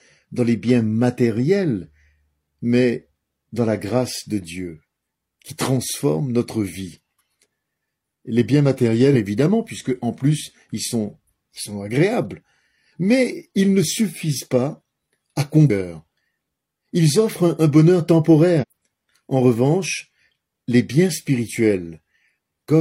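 At 9.1 s and again at 15.7 s, compressed frames are skipped: the sound leaps forward by about 0.7 s, and a third jump of about 0.3 s follows at 18.6 s. Each join skips straight on rather than leaving a silent gap. That marks it apart from a dropout. The jump sizes fit whole 46.4 ms frames going missing or being rejected as damaged.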